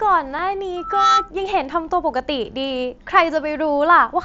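At 0.38 s there is a barely noticeable smear, a tiny repeated sliver of the speech standing in for a 7.5 ms gap. This is concealed Bluetooth headset packet loss: a packet between headset and phone went missing, and the receiver filled the hole by repeating the closest-matching recent stretch of waveform.

From 0.76 to 1.31 s a steady 1.3 kHz tone swells over roughly a third of a second into a squeal sitting a few decibels above the speech. This is loudspeaker feedback squeal: the microphone picked up the loudspeaker it feeds, and at 1.3 kHz the loop gain exceeded one, so that tone built on itself.

At 2.69 s the same kind of concealed packet loss returns, this time a 15 ms gap, which fits two consecutive lost packets. The patch is a brief buzzy repeat with a small warble as the real speech resumes. The speech shows the light graininess of the mSBC wideband headset codec.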